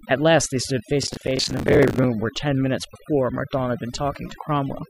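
From start to finish the speech carries overdone noise removal. The reducer was set too aggressively, pulling individual frequency bands down whenever they sat near its noise estimate, so the background collapses into near silence with twinkling specks.

Between 1.03 and 2.04 s a burst of processor overload crackle rides over the speech. The processor repeatedly missed its buffer deadlines and held stale audio with hard edges in place of each late block, producing a gritty tearing whose texture fits buffers of roughly 10 ms.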